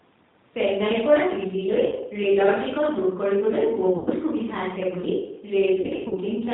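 G.729 codec damage runs through the whole speech clip: the 8 kbit/s G.729A coder rebuilds each 10 ms frame from a vocal tract filter, a pitch predictor and a few pulses, so nothing above 4 kHz survives and the voice sounds plainly rough and synthetic.

VoIP packet loss concealed by the speech codec first appears at 1.86 to 1.97 s, where about 60 ms of audio is missing, which fits two lost 30 ms packets. It returns at 3.97 to 4.09 s, with about 90 ms missing, consistent with three packets. The heaviest damage comes between 5.81 and 6.15 s, where 180 ms is lost in pieces scattered over 0.3 s, the longest gap being 90 ms. In each gap the decoder stretches its last pitch and filter into a fading buzzy tone or coloured noise, and the voice stays weak and smeared for a moment after audio resumes.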